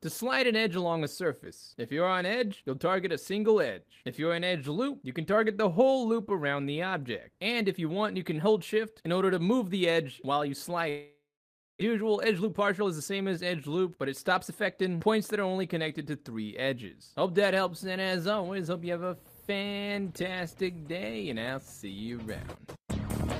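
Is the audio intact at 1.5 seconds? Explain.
Yes, the audio is intact at 1.5 seconds, with no dropout, click, distortion or other fault at that point.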